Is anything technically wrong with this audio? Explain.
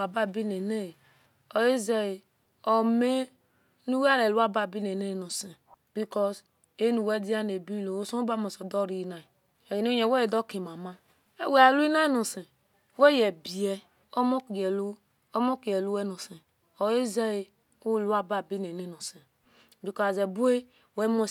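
No, the signal in this speech recording holds steady and continuous, with no technical fault audible anywhere in it.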